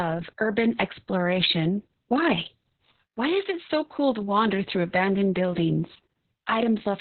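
Throughout, the speech is muffled, hoarse and faintly robotic, with nothing above 4.3 kHz. This is heavy Opus voice compression in narrowband SILK mode, which points to about 6 kbps.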